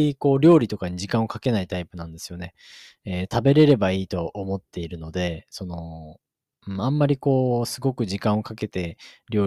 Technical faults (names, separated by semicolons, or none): hard clipping